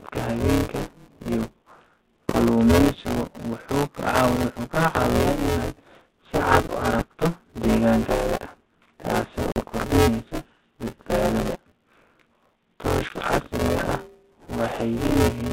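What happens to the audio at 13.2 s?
Packet loss on an ADPCM call hits between 13.07 and 13.28 s. About 30 ms of audio drops out as a hard-edged silence, as if a few packets went missing. The decoder's adaptive predictor and step size then disagree with the sender's, so the speech comes back slightly distorted before it settles.

Buffer tearing continues through this moment as a robotic buzz at about 172 Hz, which fits a 256-sample buffer. The writing and reading positions cross inside every period, so roughly half of each buffer repeats audio from about 20 ms earlier.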